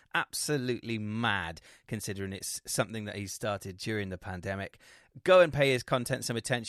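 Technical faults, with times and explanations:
No technical faults can be heard in this speech.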